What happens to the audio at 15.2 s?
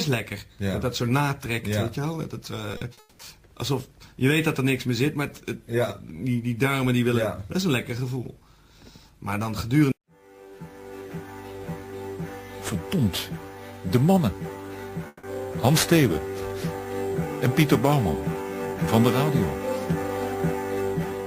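From 15.07 to 15.25 s, a likely long network dropout: the receiver stretches the last sound into a fading buzz, then about 30 ms of flat silence on the waveform, before the audio resumes with roughly 160 ms missing.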